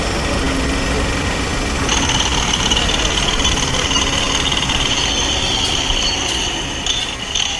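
No technical faults can be heard anywhere in this audio. There is no moment in it that calls for a timestamp or comment.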